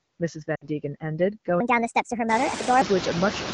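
Noise suppressor artifacts run through the whole clip. The suppressor pulls down bands it judges to be steady noise, frame by frame, cutting the noise by about 18 dB. Between phrases the background drops away. Under speech it comes back. After about 2.5 s the room noise rises to about 11 dB below the speech.

From 0.55 to 0.67 s there are lost AMR speech frames. About 60 ms of speech goes missing, which fits three lost 20 ms frames. The wideband decoder fills the hole by repeating the last good pitch and vocal tract settings at falling gain. You hear a short smeared stretch that fades quickly toward silence. Then the speech returns, briefly weak or rough before it settles.

From 1.60 to 2.82 s a section plays at the wrong speed. It runs 1.38 times too fast, so pitch and tempo jump together. The speech turns hurried and high, raised by about five semitones. It snaps back to normal at the end of the section. 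The likely cause is that this part was played against the wrong clock.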